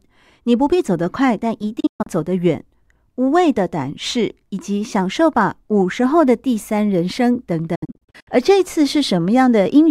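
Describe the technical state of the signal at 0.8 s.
At 0.8 s the speech signal is intact, with no audible technical fault at that point.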